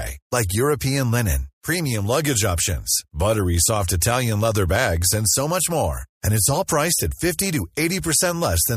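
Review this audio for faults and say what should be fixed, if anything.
No faults heard; nothing in this speech needs fixing.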